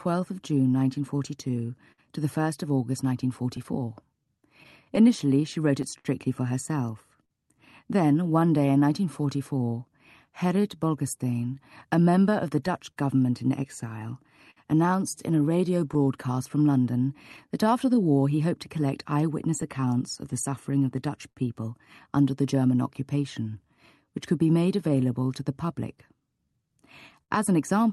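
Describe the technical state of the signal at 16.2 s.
The sender's audio clock runs about 5 percent slower than the receiver's, a clock drift between sender and receiver present through the whole clip. The jitter buffer keeps running short, so timing around 16.2 s is never fully steady and small hiccups keep recurring.

To cope, the receiver makes repeated timing corrections from 0.08 s to 26.64 s, stretching playback to about 97 percent speed and adding about a second overall. Around 16.2 s these small edits come through as an uneven, faintly wavering tempo.

The moment also falls inside a stretch of scattered short gaps from 12.91 s to 17.39 s. A handful of packets were lost or late, and the receiver patched each hole by extending the preceding sound. The fills total about a tenth of a second, none longer than about 50 ms, and they are heard as brief ticks or smears over the Opus call path's band-limited sound.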